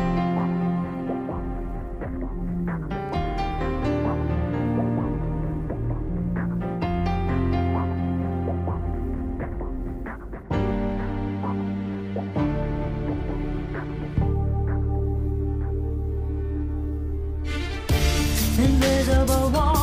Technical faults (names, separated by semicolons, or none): none